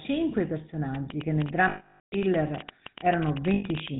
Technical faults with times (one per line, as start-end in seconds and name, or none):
0.00-4.00 GSM full-rate codec
0.95-3.89 train of clicks
1.68-2.14 lost GSM frames
3.54-3.64 lost GSM frames